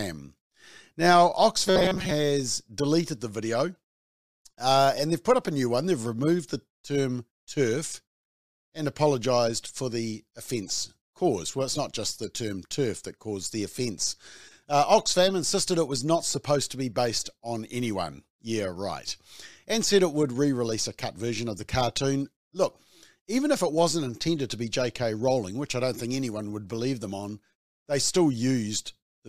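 From 1.67 to 2.11 s, robotic sound from repeated short buffers: a rigid 188 Hz buzz, likely a 5 ms block replayed through most of the span.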